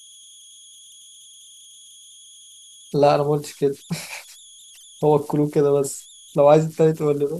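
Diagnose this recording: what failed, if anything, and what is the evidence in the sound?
The converter's at fault here: converter idle tones run through the whole speech clip. In the pauses you get a whistle around 3 kHz, and under the quieter stretches it turns into a grainy hiss, sitting about 27 dB below the signal. That's a delta-sigma converter running without dither. With tiny input levels its modulator locks into repeating bit patterns, and those cycles come out as pitched tones set by whatever small offset is present.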